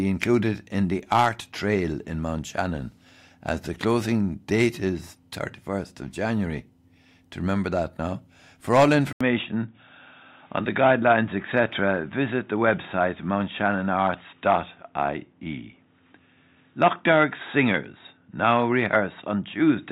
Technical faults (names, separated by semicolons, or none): input switched to a poorer device